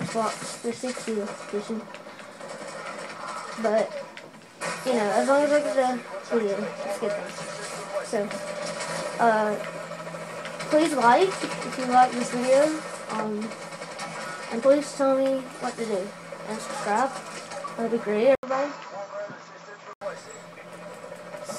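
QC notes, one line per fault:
18.35–20.01 s, likely input switched to a poorer device: after 80 ms gap, nothing above 7.6 kHz, plus faint new noise a filter wouldn't add.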